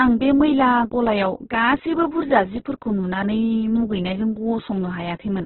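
From start to finish the speech sounds rough, grainy and dull, with nothing above 4.1 kHz. This is likely heavy Opus compression in CELT mode at a rate that fits about 8 kbps. A spectrogram shows a flat ceiling at 4.1 kHz, with noisy, smeared bands below it.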